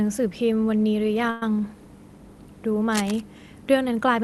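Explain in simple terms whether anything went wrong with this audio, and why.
Two things go wrong in this speech. From 1.30 to 1.43 s there's a call audio freeze: the last bit of sound is stretched into a short fading buzz for about a tenth of a second, likely because packets got held up and the receiver ran dry. When they arrived, the speech picked up where it stopped, so nothing is lost, just delayed.

Then from 2.92 to 3.21 s you get cable scratch noise, a rough burst of scratching and rustling sitting over the speech. It's likely a worn cable or connector being jiggled, making the connection flicker and spit noise into the signal.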